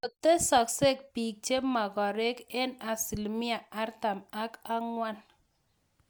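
No technical faults can be heard anywhere in this speech recording. There is nothing here that needs a time or an explanation.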